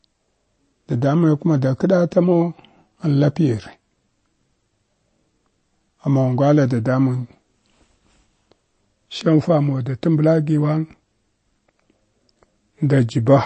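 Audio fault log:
throughout, MP3 compression: the encoder was likely starved of bits, consistent with a low MP3 bitrate around 33 kbps. It drops all content above 8.3 kHz, so the speech loses its top-end air and crispness. The damage is plainly audible because weak frequency lines are discarded and then restored from one frame to the next, which gives the speech a watery, swirling texture instead of a steady tone.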